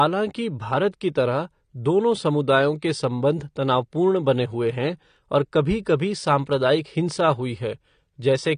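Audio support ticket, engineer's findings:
Likely AAC compression (AAC-LC) at a low bitrate, consistent with about 32 kbps. Encoder drops upper bands, nothing above 9.8 kHz, for the whole clip. Speech sounds dull and smeared, with fizzy, warbling sibilants and plainly audible codec damage.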